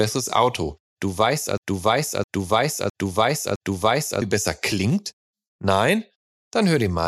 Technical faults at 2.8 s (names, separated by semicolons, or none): broken-record loop